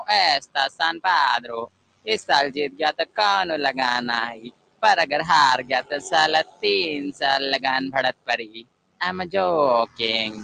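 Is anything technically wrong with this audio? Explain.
Yes. Throughout, a noise suppressor applied to music or sounds treats held tones and tails as noise, swinging the level by around 20 dB, so sustained material pumps and thins while attacks pass.

Overlap-add ripple runs throughout: frames rejoined with uneven overlap gain make the level rise and fall about 6 dB roughly a hundred times a second, a rough, buzzy tremolo.

Sound cut by the noise suppressor occurs at 0.43–0.8 s, 1.67–2.07 s, 3.0–3.18 s, 4.36–4.83 s, 5.63–5.91 s, 6.44–6.63 s and 8.13–9.01 s; steady passages sink by about 14 to 21 dB and decays are clipped short.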